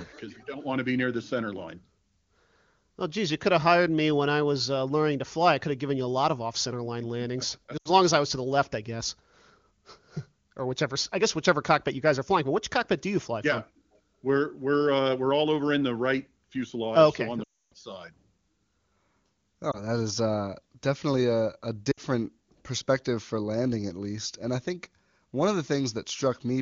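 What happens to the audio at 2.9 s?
Nothing goes wrong at 2.9 s: the speech passes through intact, carried by an AMR wideband (HD Voice) codec path whose clean, wideband sound fits one of its higher bitrates.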